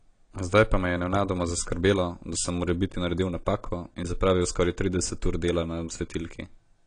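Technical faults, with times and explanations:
Throughout, AAC compression: the speech sounds dull and smeared, with nothing above about 10.2 kHz and a warbly, fizzy edge on sibilants and held sounds, likely from AAC-LC at a low bitrate near 32 kbps quantising away detail and cutting the top band.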